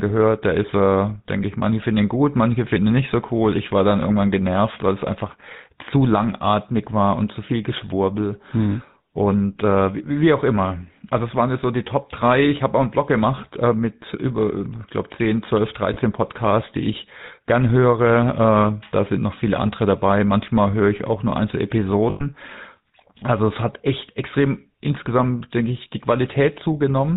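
A buzzy, gravelly roughness runs through the whole speech clip, with nothing audible above 4 kHz. That is the GSM full-rate codec, whose character points to its 13 kbps rate: it models the vocal tract and drives it with a sparse, regularly spaced pulse excitation.

From 15.94 to 15.97 s, and again from 22.1 to 22.24 s, the sound briefly freezes into a rough, metallic ring. These are lost GSM frames: the decoder repeated the last good frame's settings, covering about 20 ms and 100 ms respectively.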